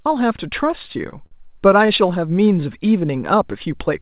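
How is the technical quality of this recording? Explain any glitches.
The recording has one clear glitch, a burst of repeated stalls (stutter) from 0.76 to 1.33 s, heard over a call-path sound band-limited to 4 kHz, which fits a narrowband G.711-style codec at 64 kbps.

Within that half-second the jitter buffer ran dry six times as packets arrived late, and each time the receiver stretched the last sound to bridge the wait. The fills total 112 ms, about a fifth of the span, with the longest lasting 51 ms. No audio is lost, but the sound drags and stammers. A spectrogram shows smeared, repeated harmonic slices and a flat top at 4 kHz. The waveform shows short looped or fading patches.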